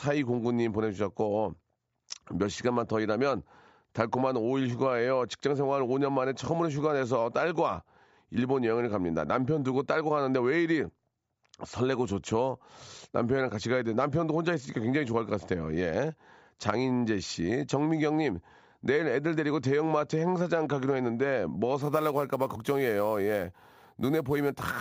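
Speech, with imaging from sample-and-hold upsampling from 21.82 s to the end. Each sample was repeated without smoothing, which fits a jump from 16 kHz to 44.1 kHz, leaving a mirrored copy between 8 and 16 kHz, about 23 dB down. Unlike steady hiss, this metallic fizz rises and falls with the speech, and its pitch moves opposite to the voice.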